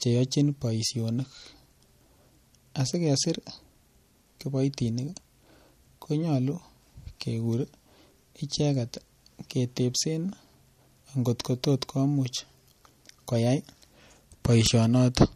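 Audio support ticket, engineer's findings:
MP3 compression, throughout. Sound is watery and swirly, with metallic chirps on s sounds and smeared attacks; nothing above 13.9 kHz. Likely an MP3 encoder starved of bits, consistent with roughly 48 kbps: treble cut at fixed frequency, weak lines toggling frame to frame.

Bit error spike, 2.93 s. Single sharp broadband tick, unrelated to the speech. One sample flipped in memory or on a digital link; value jumps by a power of two and returns.

Bit error spike, 14.67 s. Same sharp tick, two consecutive samples corrupted.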